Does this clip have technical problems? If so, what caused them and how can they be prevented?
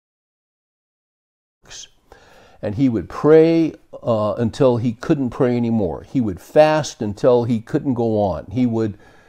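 No, there are no technical problems to report in this speech clip. The level rises smoothly near the beginning, from around 1.5 s to 1.66 s, as an intentional fade-in would, with no step or click.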